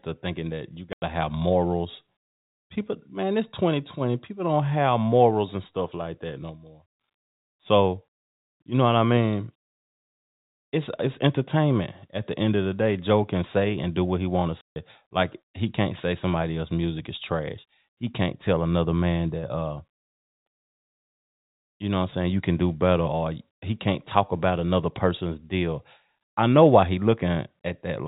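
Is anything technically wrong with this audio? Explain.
Yes. There is packet loss filled with silence. At 0.93 s, between "thinking that you" and "to have morals", the speech drops out for 90 ms. At 14.61 s, after "what he want to", a 150 ms hole follows. Both gaps fit multiples of a 30 ms packet, which the receiver replaced with silence. Their edges are hard. The narrowband telephone sound heard throughout is the G.711 coding.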